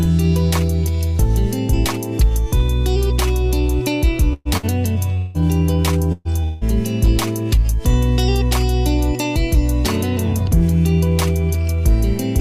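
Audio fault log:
4.33 to 4.66 s, burst of packet loss, twice: the sound freezes into a held buzz or fading hiss for about 120 ms, with a brief 20 ms hush at the end, and then for about 60 ms more. Each time it resumes further on. Short runs of packets were lost or arrived late, so the receiver stretched and faded the last sound, and roughly 120 ms and 60 ms of material are missing.
5.17 to 5.37 s, long network dropout: a smeared, fading continuation of the last sound lasts about 175 ms and never falls to silence. The sound then picks up about 180 ms later than it left off. The likely cause is that audio stopped arriving for a stretch and the receiver concealed the gap.
6.12 to 6.28 s, burst of packet loss: a held buzz or hiss lasts about 125 ms, then about 10 ms of silence, before the sound returns roughly 120 ms further along. A short run of lost or late packets was covered by extending and fading the last sound.
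6.43 to 6.64 s, long network dropout: a second fading, smeared fill lasts about 183 ms with no silent stretch, and the sound resumes with about 180 ms skipped. Again, delivery of audio likely stopped for that stretch and the receiver concealed the missing part.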